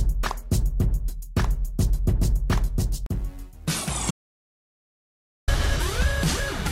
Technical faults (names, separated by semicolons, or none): audio dropout to silence